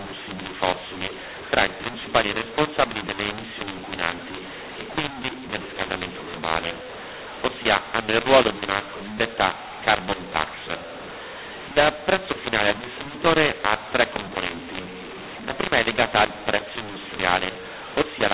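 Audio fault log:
throughout mu-law and A-law mixed up: mu-law coding read as A-law scrambles levels, making speech harsh; the waveform shows misscaled peaks, and the spectrogram shows noise filling pauses.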